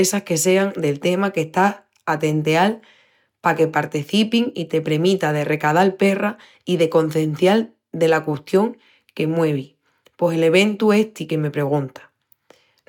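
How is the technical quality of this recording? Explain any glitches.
Nothing in this recording stood out as a glitch or technical problem on listening.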